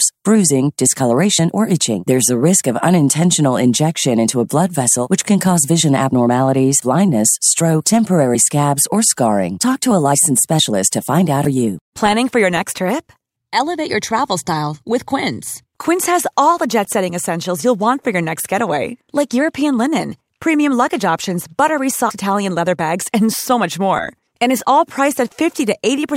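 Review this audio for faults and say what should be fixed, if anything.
A brief glitch cuts into the speech at 11.45 s. That is damaged data in a compressed stream: corrupted bytes made the decoder misread the frames at that point and lose sync until it found the next valid frame header. To prevent it, protect the encoded file or stream with checksums and error-checked transfer, and re-encode from a clean source.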